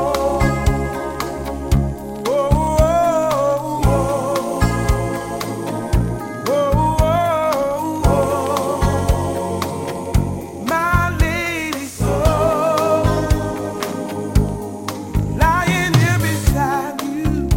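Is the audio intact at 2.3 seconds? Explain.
Yes, the audio is intact at 2.3 seconds, with no dropout, click, distortion or other fault at that point.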